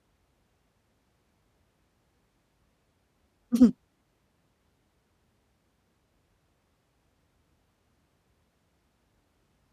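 Nothing in the recording stood out as a technical problem on listening.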